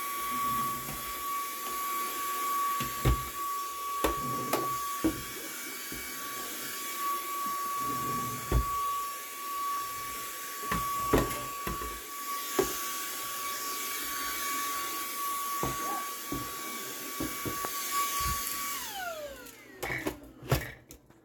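A few samples, likely dropped from the stream, make the waveform jump abruptly at 0.62, 1.64, 3.25, 7.23 and 9.77 s. Each dropped-samples gap is only about a tenth of a millisecond, so nothing audible is lost, but each jump is heard as a single sharp click.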